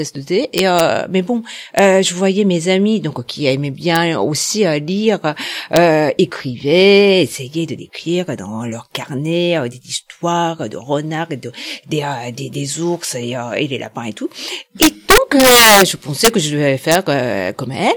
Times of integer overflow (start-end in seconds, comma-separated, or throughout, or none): 0.58-0.80, 1.79, 3.96, 5.76, 14.82-15.82, 16.25-16.28, 16.92-16.95